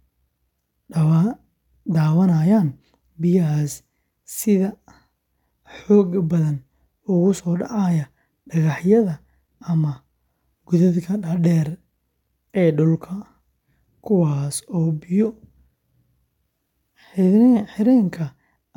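No technical faults detected.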